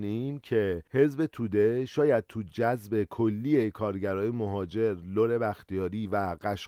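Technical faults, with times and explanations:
No technical faults can be heard in this speech recording.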